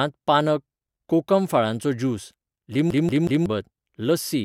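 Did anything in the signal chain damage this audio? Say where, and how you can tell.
Yes. The damage sits at the playback stage: the speech gets a CD stuck on one turn between 2.91 and 3.46 s. A fragment of about 0.18 s plays three times in a row, each pass cut off by a brief mute where the loop restarts. The result is the fast, even stutter of a skipping disc. A scratch at that point keeps sending the laser back one track, so the same short segment is read again on each rotation before playback moves on.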